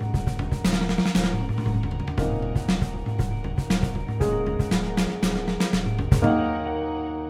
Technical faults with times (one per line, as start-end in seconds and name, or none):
6.12-7.29 sudden gain jump